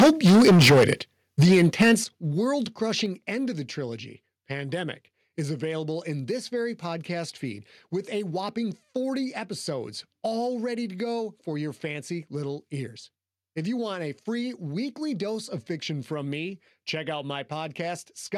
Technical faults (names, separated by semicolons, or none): microphone overload; microphone volume stepped down